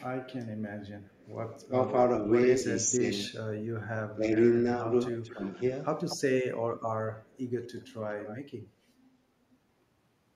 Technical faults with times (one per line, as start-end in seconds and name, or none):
1.69-1.73 speech suppressed in double talk
2.64-3.30 speech suppressed in double talk
4.16-5.42 speech suppressed in double talk
5.05-5.55 echo leak
6.08-6.52 echo leak
7.19-8.38 echo leak